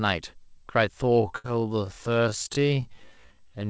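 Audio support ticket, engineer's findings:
Time-stretched section, 1.0 s to end: pace drops abruptly to roughly half speed (0.518x) with pitch unchanged. Likely a stretch stage repeating short segments to fill length. Pitch holds steady, unlike a plain slowdown or sample-rate mismatch.

Burst of packet loss, 1.38–1.46 s: last sound held and fading for about 60 ms, then resumes with about 60 ms of audio skipped. Jitter buffer or network dropping consecutive packets. Longer than a brief concealment smear, with a real content jump afterwards.

Short concealed packet loss, 2.48–2.51 s: brief smear or wobble where about 20 ms never arrived and about 12 ms was synthesised from the preceding sound before blending back. Much shorter than the 1.38 s burst, no audible held buzz. The G.722 call path's band limit (nothing above 8 kHz) sits under all three events.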